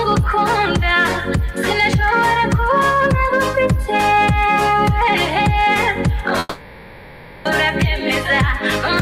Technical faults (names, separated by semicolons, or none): long network dropout